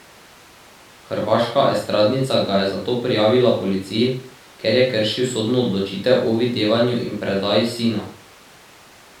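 No technical faults are audible at any point in the speech.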